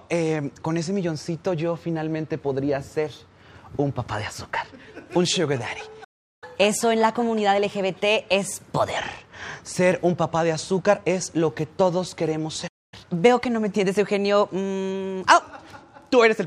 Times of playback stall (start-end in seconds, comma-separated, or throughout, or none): 6.04-6.44, 12.67-12.94